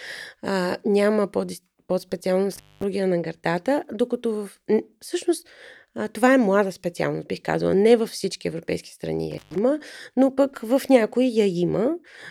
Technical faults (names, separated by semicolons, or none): intermittent contact